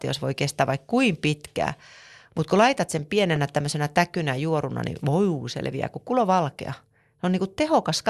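A short glitch interrupts the speech at 3.36 s, between "mutta kun laitat sen" and "tämmöisenä täkynä juoruna niin", a sign of damaged data in a compressed stream that made the decoder lose sync.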